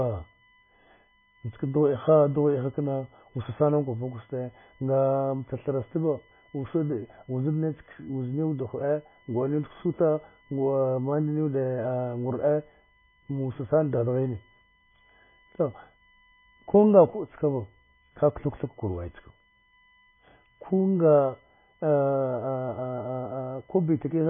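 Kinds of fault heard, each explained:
USB whine: A thin, steady whine of fixed pitch runs under the speech from start to finish. Its fundamental is at 1 kHz, but the strongest part sits at the 2 kHz harmonic, about 40 dB below the speech. The pitch locks to the USB bus's 1 ms frame rate. The current the bus draws in each frame leaks into the audio through the shared power or ground, leaving this constant tone.
MP3 compression: The speech sounds dull, watery and swirly throughout, with nothing at all above 3.5 kHz, so s sounds lose their hiss and consonant attacks smear. Weak frequency components flicker in and out from frame to frame, and the damage is heavy. The likely cause is MP3 encoding at a very low bitrate, which fits around 16 kbps. Starved of bits, the encoder cut the treble at a fixed frequency and zeroed the quieter spectral lines.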